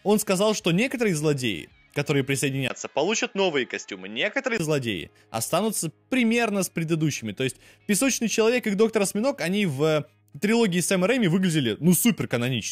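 From 2.68 to 4.60 s the sound turns duller and boxier, with nothing above 7.6 kHz, a faint new noise floor, unchanged level and a 20 ms gap at the switch. The likely cause is an input switched to a poorer device.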